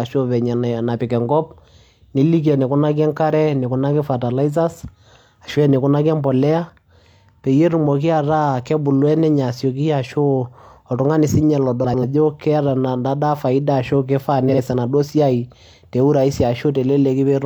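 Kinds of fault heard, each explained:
frames out of order: neighbouring blocks of coded speech were decoded in swapped sequence, so 11.84–12.03 s (93 ms blocks) and 14.48–14.59 s (46 ms blocks) play with halves exchanged, a garbled flutter. Spectrograms show abrupt formant jumps, and waveforms show discontinuities at three joins.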